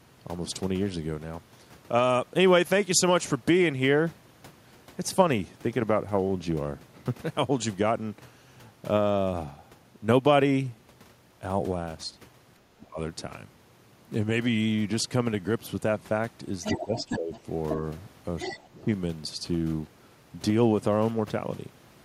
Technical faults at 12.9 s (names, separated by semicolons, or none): speech suppressed in double talk